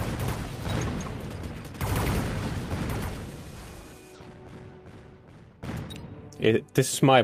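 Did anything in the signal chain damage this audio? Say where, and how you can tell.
Yes. Jitter buffer speed-up at the network receiver, from 3.36 to 4.49 s at 108% and from 5.12 to 7.17 s at 124%. The audio hurries at unchanged pitch. A spectrogram keeps harmonic heights while events crowd closer, as whole pitch periods are cut out, roughly 100 ms and half a second in total.

A skip ahead in the same jitter buffer, between 3.56 and 3.58 s, drops roughly a second of audio with no fill. The buffer discards queued audio to shed that much delay at once. The waveform splices directly across, and the spectrogram shows an abrupt seam with no gap.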